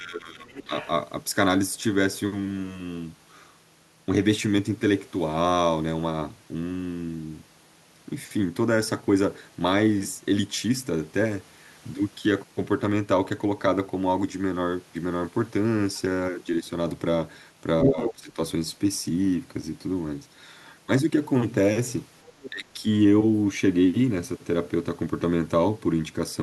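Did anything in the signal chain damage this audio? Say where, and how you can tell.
Yes, both in the call-processing stage. The first fault is speech suppressed in double talk. The talker's speech dips at 0.0 to 0.72 s, 17.84 to 18.38 s and 22.5 to 22.85 s, by up to about 20 dB. The likely cause is the echo canceller failing to separate near-end speech from loudspeaker echo during overlapping talk and attenuating the whole signal.

The second fault is the other side's voice leaking through. A second voice is audible at 0.48 to 0.9 s, about 20 dB under the talker, and briefly at 15.95 to 15.99 s, about 35 dB down. At 17.82 to 18.13 s it is about 5 dB louder than the talker, and at 22.24 to 22.5 s it sits about 15 dB down. This likely comes from residual loudspeaker echo that the canceller did not remove from the microphone path.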